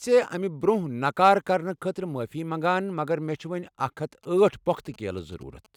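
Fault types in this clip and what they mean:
GSM signalling bursts: a nearby 2G phone's short radio bursts are rectified by the audio circuitry, giving a galloping dit-dit pattern of brief buzzes at about 217 Hz, here from 4.23 to 5.67 s, roughly 30 dB below the speech.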